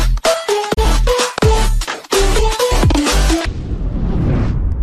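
At 0.73 s the sound fades out over about 20 ms and stays silent until 0.79 s, a digital broadcast dropout. A frame failed to decode, so the receiver muted rather than play corrupt data, and the missing stretch of roughly 24 ms fits a single lost frame. The short fade into true silence marks it apart from a hard edit or a clipped gap, and the programme resumes later rather than picking up where it stopped.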